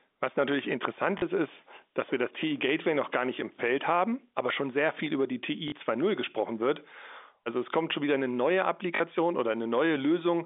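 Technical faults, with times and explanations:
1.18 s, 5.68 s and 8.96 s: packet loss with the last packet repeated. Each time about 40 ms of audio goes missing, which fits two lost 20 ms packets, and the receiver fills the gap by replaying the last good packet. The first hits right after "natürlich interessant" and just before "ist ist dass wir", and the last comes after "schon wieder eine neue". The short loop gives a brief robotic stutter with a buzzy edge at the packet rate. It sits over the narrow telephone band, which runs from roughly 250 Hz to 3.6 kHz on G.711.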